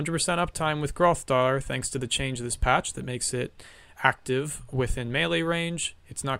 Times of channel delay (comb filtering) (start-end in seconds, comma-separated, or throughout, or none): none